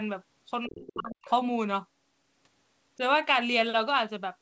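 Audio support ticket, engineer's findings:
Speech suppressed in double talk, 0.67–1.28 s. Likely cause: the echo canceller could not separate near-end speech from loudspeaker echo during simultaneous talk and attenuated everything. The talker's level drops, down by about 40 dB at worst, for roughly half a second in total.

Other side's voice leaking through, 0.87–1.03 s. Likely cause: incomplete echo cancellation of the far-end loudspeaker signal picked up by the microphone. A short scrap of the far-end voice is audible, about 20 dB below the talker.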